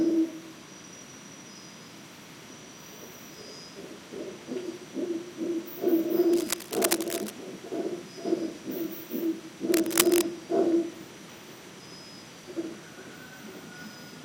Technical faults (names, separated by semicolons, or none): cable scratch noise